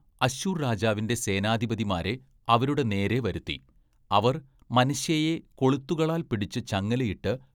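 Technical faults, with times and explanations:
Nothing stood out on listening to this speech recording.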